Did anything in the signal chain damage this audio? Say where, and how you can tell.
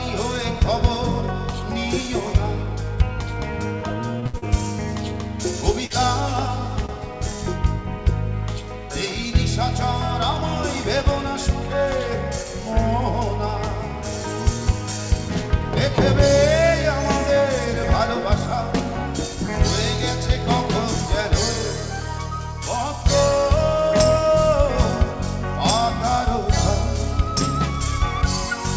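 Yes. The damage happened in the network and jitter-buffer stage of the call path. Short stalls from late packets occur at 4.20 to 4.25 s, 4.26 to 4.46 s and 6.86 to 6.92 s. Each time a packet missed its playout deadline, the buffer ran dry. The receiver held the last sound for about 25 ms, 72 ms and 29 ms until the data arrived, then resumed from the same point. Little or nothing is lost, but the sound is stretched, and the delay grows by those amounts.

Short concealed packet losses follow at 4.38 to 4.45 s, inside the second stall, and at 5.86 to 5.93 s. Here about 40 ms of audio each time never reached the decoder. The receiver invented replacement material, 40 ms and 34 ms respectively, by continuing the preceding sound and then cross-fading back into the real signal. That gap-filling is heard as a brief smear or wobble, and a short transient in those windows can disappear entirely. 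The G.722 codec's cut-off, with nothing above 8 kHz, is present throughout.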